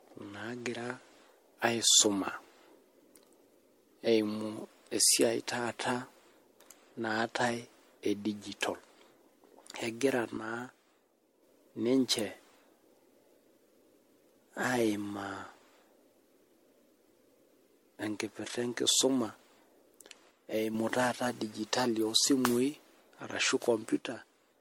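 Throughout the recording the speech has most likely been through repeated lossy coding, with signs pointing to about five passes through MP3 at around 64 kbit/s. That is generation loss: each re-encode quantises again on a shifted frame grid, so coding noise and spectral gaps build on one another. The result is a swirly, hollow, smeared quality beyond what that bitrate alone would give, with softened consonant attacks and nothing above 16.5 kHz.

From 10.37 to 11.43 s, then 20.31 to 20.75 s, and finally from 23.99 s to the end, one channel drops out, most likely because one stereo leg of the signal was briefly lost. With only one side feeding the mono sum, the shared content falls abruptly by about 6 dB. The speech sounds suddenly quieter for each stretch, then jumps back up when the channel returns, except at the end, where the level stays down.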